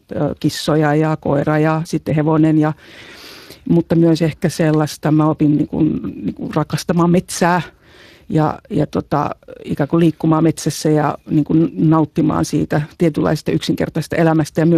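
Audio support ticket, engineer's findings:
Speex codec damage, throughout, 0 to 15 s. Speech sounds noisy and hoarse, clearly audible on every phrase. The CELP coder models the excitation with too few bits, so the buzz and breath of the voice come out rough and grainy. The rate points to roughly 22 kbps. No content above 15.3 kHz. Probable component: Speex encoder in the VoIP or chat path. Fix: raise the quality setting or move to a modern codec.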